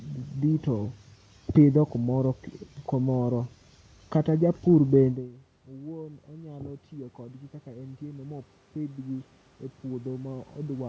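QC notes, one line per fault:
5.1–9.3 s, automatic gain rising: input dropped about 20 dB after "kata japur", so gain control climbed about 8 dB, swelling speech and room noise together.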